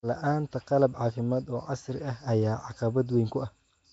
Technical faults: Nellymoser compression

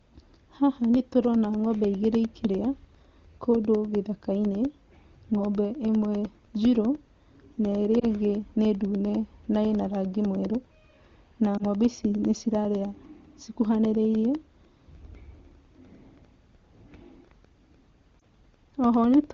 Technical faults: periodic USB or driver dropouts; lost AMR speech frames

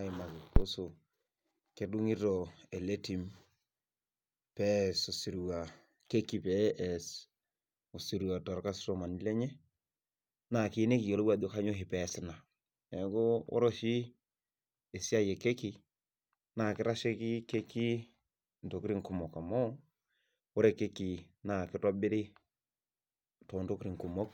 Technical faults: phantom power thump

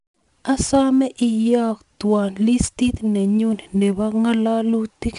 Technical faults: 4-bit ADPCM compression

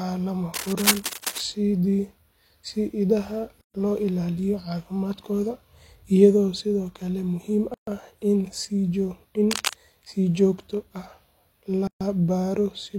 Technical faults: cable scratch noise; gap at a join of encoded pieces

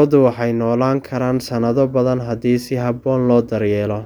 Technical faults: none

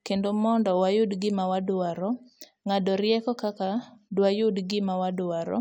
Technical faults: none

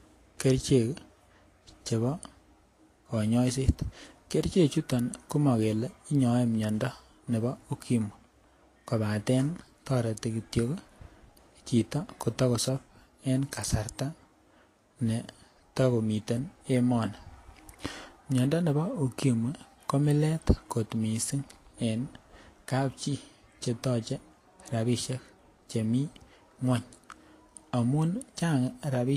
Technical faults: low-bitrate audio saved at a high bitrate

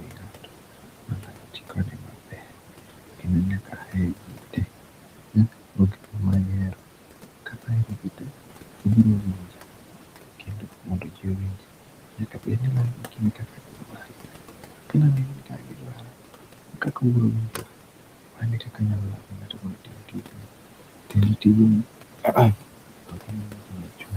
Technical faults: noise suppressor artifacts; speech cut by the noise suppressor

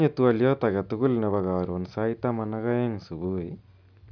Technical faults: none

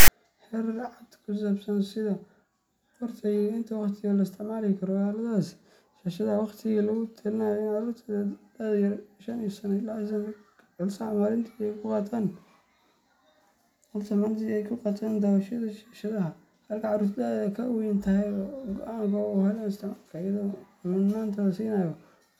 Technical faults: file tags played as audio

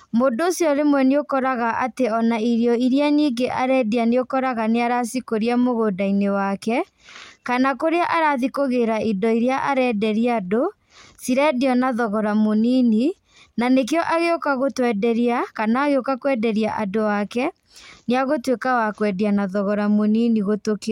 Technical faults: none

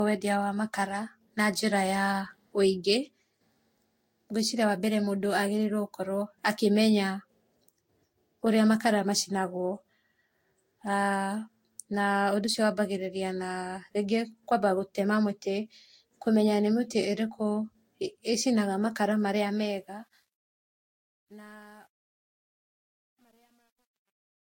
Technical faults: generation loss; truncation distortion on a fade

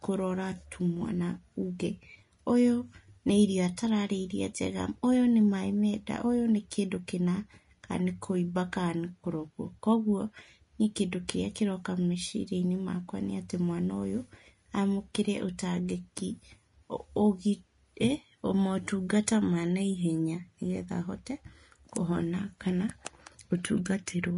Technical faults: Vorbis compression

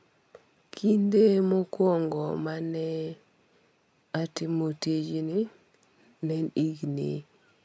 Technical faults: none

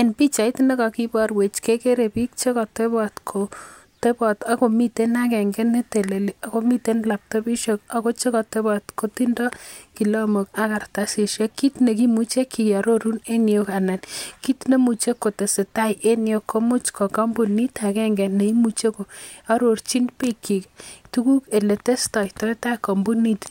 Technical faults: none

